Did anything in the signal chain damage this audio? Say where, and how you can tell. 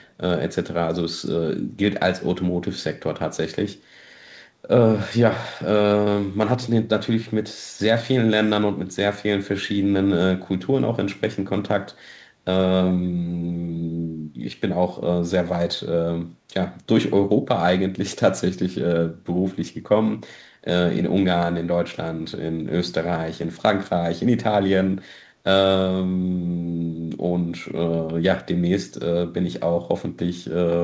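Yes, at the call-processing stage, from 0.02 to 0.1 s. A very faint copy of the speech trails it by about 0.25 s, likely an echo leak from a far-end echo canceller. On a spectrogram it appears as a weak, time-shifted ghost of the speech pattern, below the 8 kHz band edge.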